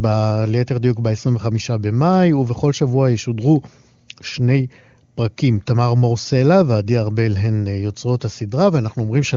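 No technical faults can be heard in this speech; it carries the band-limited character of AMR wideband (HD Voice) coding at one of its upper rates, with no roughness or raspiness from the codec beyond, at most, a faint trace.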